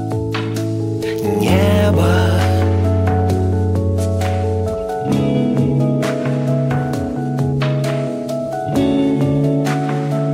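Nothing goes wrong anywhere in this audio, so there's no technical fault to point out at any moment.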